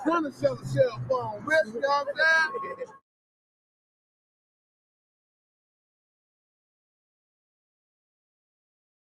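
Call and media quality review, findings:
Noise suppressor applied to music or sounds, throughout: speech-tuned suppression treating steady tones and decay as noise; level swings around 15 dB, giving pumping and thinned tails while attacks pass.

Sound cut by the noise suppressor at 0.31–0.67 s, 1.64–1.79 s and 2.79–3.02 s: held or fading sound classed as noise, dipping about 12, 9 and 13 dB respectively.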